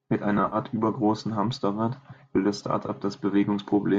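From 0.38 to 0.56 s the speech goes smeared and noisy in patches: AAC frame loss with concealment, about 70 ms lost across 140 ms, the longest gap around 40 ms, likely from a low-delay AAC-ELD stream at 64 kbps. The decoder repeats the last good spectrum with scrambled phase, so a spectrogram shows blurred, harmonic-less smudges and the waveform loses its periodic shape. A second, 20 ms dropout follows "will das" at 2.87 s.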